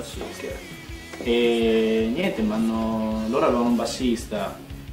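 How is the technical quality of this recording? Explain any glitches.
Quality is impaired by one stretch of packet trouble. Scattered short gaps run from 2.02 to 3.04 s. About seven small holes, none longer than roughly 15 ms, were patched by carrying the preceding sound forward, leaving brief ticks, smears and hiccups across that second.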